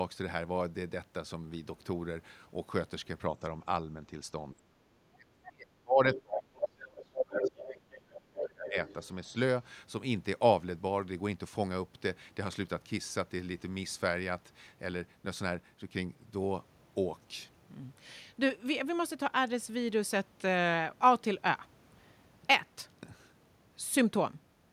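Speech runs through this clip with two echo-canceller problems. The first is speech suppressed in double talk. The talker's level dips by about 20 dB at 4.54–4.66 s. From 5.04 to 8.76 s it is pulled down by up to about 35 dB for roughly three seconds in total, most likely because the canceller mistook the overlap for echo. It differs from ordinary dropouts because the attenuation follows the far side's activity. The second is the other side's voice leaking through, heard at 6.14–6.21, 6.92–7.75, 7.91–8.0, 8.46–8.7 and 8.88–9.08 s. It is strongest at 6.92–7.75 s, where it sits roughly level with the talker, and elsewhere runs from about 10 to 25 dB below. Its likely cause is residual loudspeaker echo that the canceller failed to remove. Unlike crosstalk or background chatter, it mostly lines up with the moments the talker is being suppressed.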